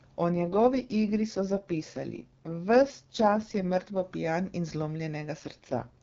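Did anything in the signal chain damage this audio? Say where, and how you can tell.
Yes. The damage comes from the codec, driven by the radio network. This is an AMR rate drop. From 0.32 to 4.03 s, just before "pijan in", the speech turns rough and synthetic. It happens again from 5.39 to 6.02 s. The bandwidth stays the same and nothing drops out. The texture changes, which fits a fall from 23.85 to 6.6 kbit/s. On a weak link, the network trades speech bits for error protection, so the vocal model gets coarser.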